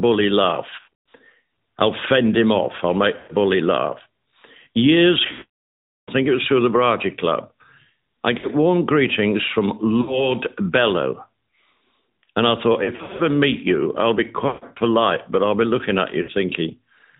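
Throughout, the speech carries the AMR narrowband mobile codec. Nothing above 4 kHz survives. The voice sounds buzzy and synthetic, which fits a mid-rate mode near 10.2 kbps. A pulse-driven vocal tract model rebuilds each frame, so the damage is plainly audible.

Lost AMR speech frames recur at 0.70–0.94, 3.18–3.34, 5.32–6.11, 8.38–8.47, 10.02–10.30, 12.84–13.24, 14.48–14.65 and 16.22–16.31 s. The decoder repeats the last good settings with falling gain. Sound smears, warbles and fades.

The 5.32 s gap is longest, about 760 ms, and drops to silence. The 8.38 s dip comes just before "warm greetings from". The 14.48 s loss falls between "meet you I'll be" and "polite but I'll be". The last follows "I'll be looking at".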